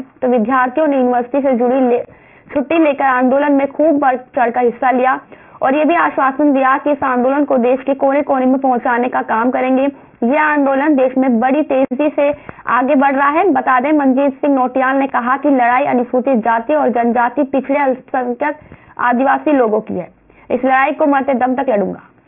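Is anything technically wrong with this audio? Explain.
Yes, there's aliasing running through the whole clip. The sound was downsampled without an anti-alias filter, which fits a drop to around 6 kHz. Content above the 3 kHz fold point reflects back as gritty, metallic tones unrelated to the source, sitting roughly 25 dB under the signal.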